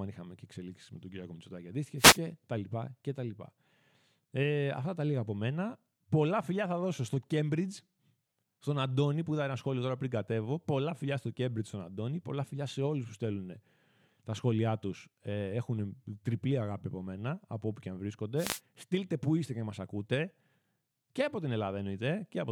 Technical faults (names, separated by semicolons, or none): wireless microphone noise hit